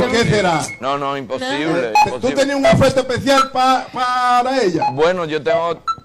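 No technical faults can be heard anywhere in the clip. Nothing in the audio points to a problem at any point in its running time.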